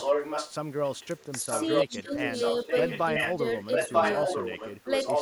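An echo leak runs from 0 to 0.54 s, 0.86 to 1.06 s, 1.5 to 2.0 s, 2.19 to 3.37 s and 3.71 s to the end. It's a copy of the speech trailing by about 0.94 s, often as loud as the talker or louder, and faint around 1 s. The likely cause is a far-end loudspeaker leaking past its echo canceller. Speech suppressed in double talk shows up at 1.43 to 1.51 s and 1.83 to 2.14 s, with dips of about 10 dB and then about 20 dB. The canceller likely ducked the talker along with the echo.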